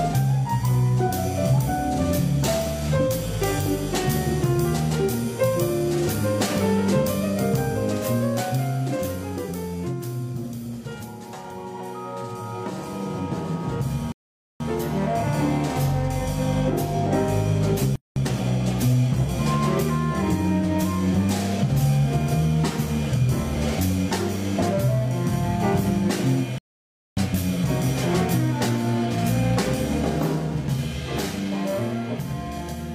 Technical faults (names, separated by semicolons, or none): rebuffering stall; playback stall; time-compressed catch-up